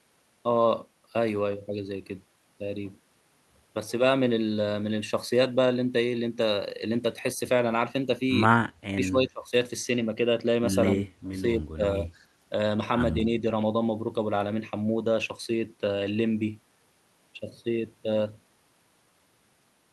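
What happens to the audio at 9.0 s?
From 8.94 to 9.54 s the speech is turned down in pieces, dipping by around 25 dB for roughly 0.4 s. This is speech suppressed in double talk, likely an echo canceller ducking the talker against far-end speech. Unlike packet loss, the level dips rather than gapping.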